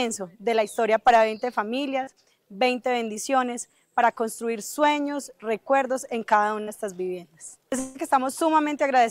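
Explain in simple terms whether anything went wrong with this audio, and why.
Two short blips, at 2.03 to 2.10 s and 6.63 to 6.70 s, are short concealed packet loss. About 40 ms of audio arrived too late each time, so the player stretched the last bit of sound to cover the hole, leaving a quick smear or wobble.

From 7.79 to 7.98 s a longer stretch, about 0.16 s, was lost, likely a long network dropout. The player kept extending the previous sound across the whole gap instead of going silent. It is several times longer than the blips, so it is heard as a drawn-out buzz or hiss, not a quick smear.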